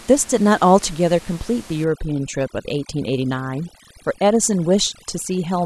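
From about 1.84 s to the end, overdone noise removal takes hold. The noise reduction is set too aggressive, so any frequency band sitting close to its idea of the noise gets pushed right down or switched off. The room noise, about 22 dB under the speech, collapses into near silence with little twinkling specks, and the quieter parts of the speech get dragged out along with it.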